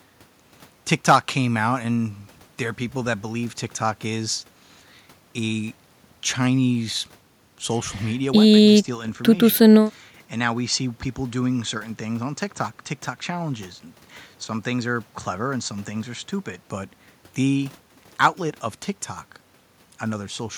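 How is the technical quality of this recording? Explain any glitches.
The recording has one fault. From 8.48 to 16.68 s the speech turns dull and boxy with a new, faint noise floor, then clears. The likely cause is an input switched to a poorer device, whose narrower band cuts the upper frequencies. A spectrogram shows the top band abruptly empty, while the waveform keeps roughly the same level with no gap at the switches.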